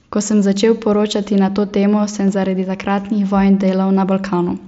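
Concealed Bluetooth headset packet loss twice drops what sounds like one 7.5 ms frame of this speech, at 0.98 s and 2.28 s, each patched over with repeated recent waveform and nearly hidden, while the mSBC headset codec adds only light graininess.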